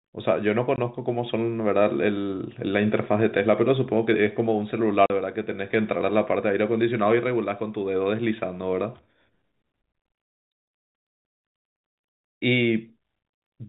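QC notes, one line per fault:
0.76 s and 5.06–5.10 s, packet loss filled with silence: abrupt 20 ms and 40 ms holes with hard edges, which fits one and then two lost 20 ms packets replaced by silence.
7.76–10.71 s, loudspeaker feedback squeal: a steady 4.1 kHz tone swells over roughly two seconds to about 10 dB above the speech, as the microphone-loudspeaker loop gain exceeds one there.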